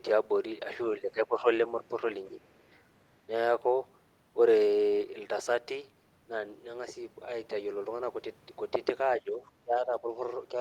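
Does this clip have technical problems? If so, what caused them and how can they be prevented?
Yes. The speech dips in level in four places: from 1.0 to 1.46 s by roughly 10 dB, briefly from 2.3 to 2.4 s by a few decibels, from 9.21 to 9.42 s by roughly 10 dB, and from 9.63 to 10.17 s by about 15 dB, the deepest cut. The likely cause is speech suppressed in double talk: with both ends talking at once, the echo canceller mistook this talker for returning loudspeaker echo and attenuated it. Using a headset, or an echo canceller with better double-talk detection and gentler residual suppression, would prevent it.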